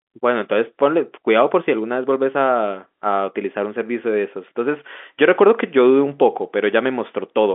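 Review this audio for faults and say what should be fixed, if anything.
Nothing needs fixing: the speech arrives over an ordinary G.711 mu-law telephone path, its content confined to the line band of 250 Hz to 3.5 kHz as that format and connection are meant to deliver it.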